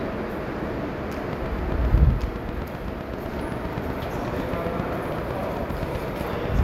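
An everyday-sound recording with a train of clicks running from 1.33 s almost to the very end at 6.6 s. The pulses all have much the same shape and arrive at a steady 7.8 per second, around forty in all, ticking through the sound and its quieter stretches alike and poking up roughly 10 dB above it. That regular, repeated pulse likely comes from interference from nearby gear or a faulty connection or power supply.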